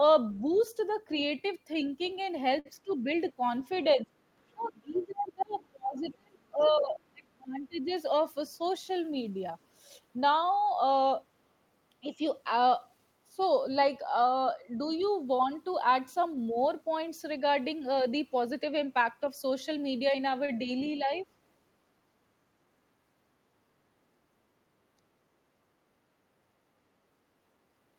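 A speech recording in which an echo canceller, likely leaving residue of the loudspeaker signal, lets the other side's voice leak through faintly, roughly 30–35 dB under the talker, at 0.34–0.92 s, 2.13–3.78 s, 4.99–5.66 s and 15.00–15.10 s. Late packets empty the jitter buffer, causing a short stall from a late packet at 2.59 s (58 ms) and 20.46 s (24 ms), where sound is held too long. Speech is suppressed in double talk, likely because the canceller mistakes the talker for echo. This pulls the voice down deeply from 2.84 to 7.90 s, and more lightly at 12.02–12.22 s, 13.31–13.40 s and 20.11–21.26 s. A jitter buffer speed-up from 8.13 to 9.29 s trims around 50 ms, so the talker runs at 104% speed with pitch unchanged.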